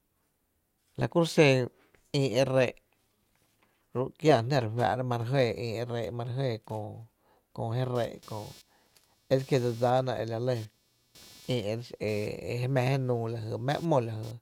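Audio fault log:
7.95–14.31 s, computer activity noise: a buzzing, chirping layer enters partway through the speech and runs nearly to the end, pulsing at around 300 per second and sitting roughly 30 dB below the speech. Changing load on the machine's processor, graphics or mouse circuitry disturbs the ground the audio input shares, so the interference rises and falls with what the computer is doing rather than with the speech.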